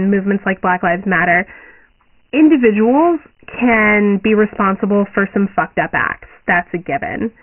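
Dialogic VOX ADPCM encoding, heavily applied throughout the speech, quantises each sample to 4 bits, consistent with about 24 kbps at 6,000 samples a second, leaving gritty hiss trailing the voice and nothing above 2.9 kHz.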